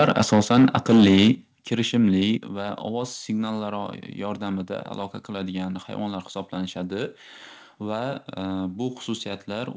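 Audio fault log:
0.0–1.3 s, microphone overload: the loudest peaks sound harsh and crackling, likely because the input level ran about 7 dB past the converter's ceiling, flattening roughly 7% of samples.
0.35 s, 1.35 s, 2.37 s, microphone volume stepped down: voice and background drop abruptly by about 2 dB, 7 dB, then 5 dB, likely from the call software lowering input gain after distorted peaks.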